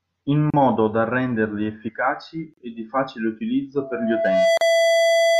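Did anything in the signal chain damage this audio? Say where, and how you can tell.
Yes. Brief holes of silence cut into the speech at 0.50, 2.54 and 4.57 s, each 33 to 38 ms with smeared edges, every 2 s. This is a gap at a join of encoded pieces: separately encoded 2-second segments were spliced without trimming encoder delay and padding.

From 3.77 s to the end, a steady 668 Hz tone swells over roughly 0.7 s, then sits about 5 dB above the speech. This loudspeaker feedback squeal happened in the acoustic path, where the microphone picked up its own loudspeaker and loop gain exceeded one at 668 Hz.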